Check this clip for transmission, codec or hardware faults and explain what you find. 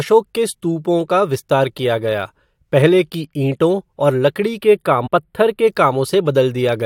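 Two faults turn up in the speech near its end. From 4.62 to 5.67 s the sound turns thin and slightly hollow at the top. This is channel delay (comb filtering): one channel lags by a few samples, under a tenth of a millisecond, so summing to mono notches the highs from around 7 kHz. From 5.06 to 5.08 s a brief glitch cuts through. That is damaged data in the compressed stream: corrupted frames made the decoder misread, lose sync and resynchronise further on.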